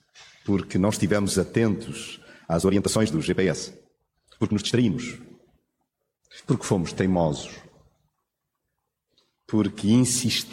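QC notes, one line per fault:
2.43–4.97 s, time-stretched section: the pace jumps abruptly to about 1.64 times normal while pitch holds steady, giving a choppy, rushed stretch. This is likely software compressing the passage to fit a length, dropping short slices to preserve pitch.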